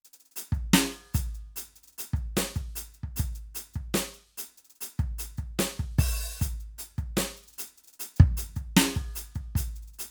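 The music signal runs without any dropout, glitch, clipping or other technical disturbance at any point in the clip.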